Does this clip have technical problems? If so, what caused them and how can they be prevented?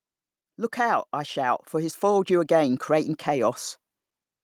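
Yes. The clip shows automatic gain rising from 0.75 s to 3.65 s. Over almost three seconds the level climbs by about 7 dB. The voice and the background noise swell together, so the room sound grows along with the speech. This happens when an automatic gain control judges the input too quiet. It then raises its gain slowly to compensate. To prevent it, disable automatic gain control and set a fixed input level before recording.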